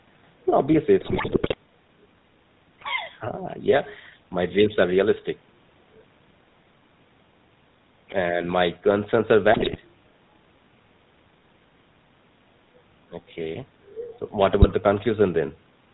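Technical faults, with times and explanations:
Throughout, GSM full-rate codec: the speech has a plainly audible buzzy, gravelly roughness and a dull, boxy tone with no brightness above 4 kHz. The coder keeps a coarse model of the vocal tract and excites it with a sparse train of regular pulses, discarding most of the excitation detail. That thin, rasping texture and hard bandwidth ceiling fit the 13 kbps GSM full-rate coder.
1.00 to 1.54 s, 9.52 to 9.77 s and 14.60 to 14.74 s, GSM bit errors: the speech breaks into squawks, pops and gargling bursts. The first run is the longest and roughest, and the last is the shortest. Corrupted bits on the radio link reached the decoder and scrambled the filter, pitch and gain parameters for the affected frames, so the spectrum bends and the level jumps abruptly before clean decoding resumes.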